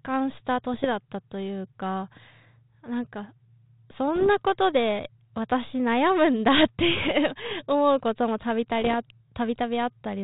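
Bit errors on an ADPCM link corrupt the speech four times, from 0.74 to 0.86 s, 4.16 to 4.30 s, 7.02 to 7.11 s and 8.82 to 8.95 s. The light coding texture suggests a 32 kbit/s G.726 link. Flipped bits, at most around 0.7 percent, throw off the decoder's step size and predictor, so each error rings on briefly. Each burst is heard as pops and a rough, gritty patch with a short change in level.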